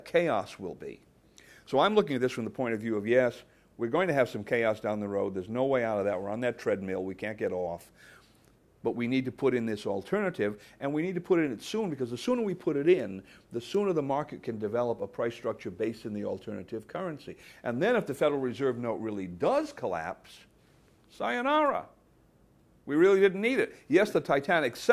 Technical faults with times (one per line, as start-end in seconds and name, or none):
none